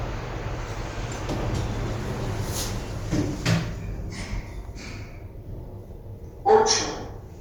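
An everyday sound recording carries Bluetooth LC3 compression damage throughout, plainly audible as a grainy, breathy edge where upper detail is replaced by noise fill, with nothing above 20.1 kHz. This is likely a Bluetooth LE Audio link, consistent with 10 ms frames at about 48 kbps.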